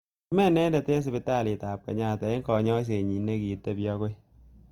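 The speech was likely squeezed through the Opus codec in its music (CELT) mode at a low bitrate, with the damage consistent with something near 24 kbps across the whole recording. Bits run short, so the encoder fills bands with folded copies of lower ones or with noise. That leaves plainly audible Opus compression: tones sound grainy, rough and noisy. The band stays full-width, with content running up to about 20.2 kHz.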